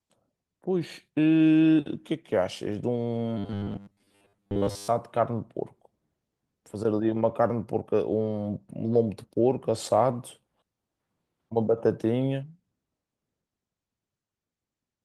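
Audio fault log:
3.38–4.88 s, robotic sound from repeated short buffers: the speech becomes a stiff metallic buzz at 100 Hz that loosely follows the words. The likely cause is a 10 ms chunk replayed while fresh audio runs late, with most of the sound repeated.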